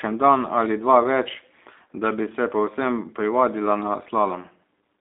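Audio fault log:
throughout G.729 codec: thin, rough, plainly synthetic speech with nothing above 3.6 kHz, rebuilt from a vocal tract model and sparse pulses, fitting G.729A at 8 kbit/s.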